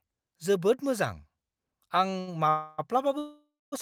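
A speech clip with two short stalls from late packets and then two call audio freezes, all after the two-second mark. The first stall runs from 2.10 to 2.14 s, holding the sound for about 21 ms. The second runs from 2.20 to 2.29 s, holding it for about 70 ms. In each, the last sound is stretched with a slight buzz or dip until the packet arrives. The speech then resumes from the same point, so nothing is lost. Each stall adds its own length of delay. Two call audio freezes follow. The first lasts from 2.49 to 2.80 s, about 291 ms. The last sound carries on as a fading buzz or hiss and never reaches silence. The second lasts from 3.18 to 3.74 s, about 538 ms. Here the fill decays and ends in about 230 ms of silence. After each freeze the speech picks up where it stopped, with nothing missing, only later. The likely cause is packets held up in transit, draining the jitter buffer.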